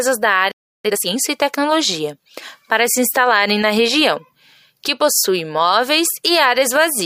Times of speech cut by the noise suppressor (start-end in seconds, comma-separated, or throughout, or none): none